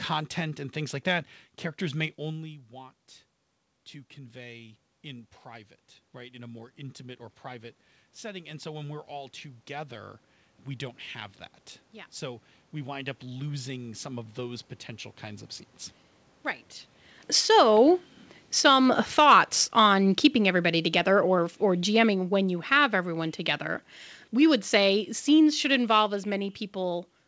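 Just after "like that characters may", around 2 s, the talker backs off the mic and the level drops by about 19 dB. From 2.27 s to 15.55 s you can hear the automatic gain rising to compensate. It creeps up by about 16 dB over those thirteen-odd seconds, so the voice slowly swells back. The room noise comes up right along with it, and that's the giveaway that it's gain riding and not the talker drifting back in.

Then around 17 s the talker leans in again, and the input is suddenly hot. From 17.21 s to 22.89 s there's automatic gain falling, with the control pulling back by about 9 dB. The voice starts out loud and sinks gradually, the background sinking with it, until things settle just before "everyone together". All of this sits on a call path with nothing above 8 kHz, which fits G.722.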